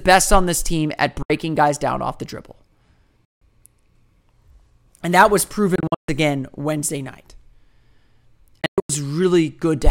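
Speech with four abrupt silences: about 70 ms at 1.23 s, 170 ms at 3.25 s, and broken, stuttering gaps across 5.76–6.09 s and 8.61–8.90 s. Each time, the speech resumes further on, as if it had kept playing. These are likely Bluetooth dropouts, with packets arriving too late and being discarded.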